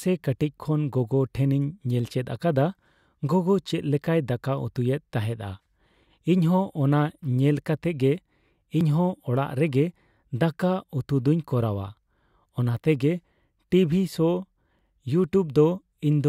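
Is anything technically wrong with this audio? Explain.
Yes, there's audio missing between chunks at 8.81 s: a tiny skip of about 20 ms, spliced shut, likely from a 6-second chunked recorder losing samples at the handover.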